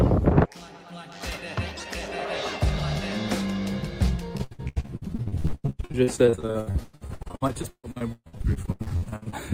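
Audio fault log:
4.37–9.34 s, repeated packet loss (robotic sound): from 4.37 s to the end of the run, the audio keeps dropping out in short holes, about a dozen every second, the longest about 140 ms. Each hole is bridged by stretching out whatever sound came just before, and about half of this five-second stretch is that patched-in material. The constant switching between real and repeated fragments gives a choppy texture with pieces missing.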